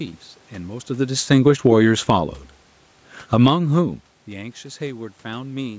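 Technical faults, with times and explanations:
1.16–1.75 s, automatic gain falling: The level sinks by about 4 dB over roughly 0.6 s. The gain control judged the input too loud or its background noise too strong and pulled its gain down, so voice and room noise drop together.
1.67–2.5 s, automatic gain rising: Overlapping that dip, the gain climbs back by about 3 dB across 0.8 s. The control found the input too quiet and raised its gain, and the background swells along with the voice.
3.18–3.62 s, automatic gain falling: A steeper cut of about 11 dB within 0.44 s. The gain control reacted to input it judged too loud or too noisy, and voice and background fall sharply as one.
3.53–4.92 s, automatic gain rising: Around 3.5 s the talker moves away and the voice arrives about 18 dB quieter. The control lifts its gain by about 8 dB over 1.4 s, raising voice and room noise together.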